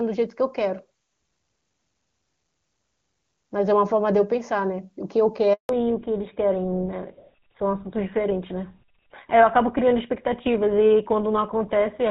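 At 5.53 s the speech cuts out for 160 ms, until 5.69 s. This is a handover gap: the call switched networks and no speech frames arrived. From 5.69 s to the end, everything above 4 kHz is gone, and the voice turns duller and rougher than the clear HD Voice before it. This is a fallback to narrowband: the codec dropped from AMR wideband to an older narrowband one, consistent with GSM full rate.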